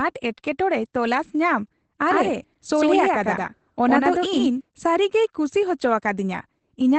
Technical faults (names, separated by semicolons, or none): Opus voice compression; doubled audio track